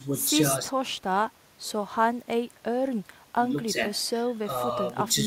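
A speech recording with no technical faults to report. Nothing in it calls for a time or a cause.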